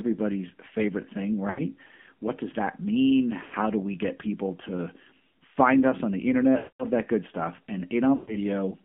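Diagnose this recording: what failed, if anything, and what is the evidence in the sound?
The codec stage is at fault throughout. This is speech carried by the AMR narrowband mobile codec. Nothing passes below about 150 Hz or above 3.5 kHz. The voice has a plainly audible buzzy, synthetic edge. That texture points to a low AMR-NB mode, around 7.4 kbps. At that rate the codec rebuilds speech from a vocal tract model driven by a few pulses per subframe. Too few bits leave the excitation coarse, so the voice sounds artificial.

The radio link also failed, as lost AMR speech frames. There are four gaps. The first runs from 1.50 to 1.61 s, after "favorite thing". The second runs from 3.44 to 3.54 s. The third runs from 6.58 to 6.85 s, between "find us on the" and "that good stuff". The fourth runs from 8.16 to 8.37 s, after "that good stuff". The gaps last 80, 80, 220 and 120 ms, which fits runs of 20 ms frames. 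Corrupted frames failed their checksum. The decoder then repeated its last pitch and vocal tract settings with falling gain. The sound smears, then fades toward silence.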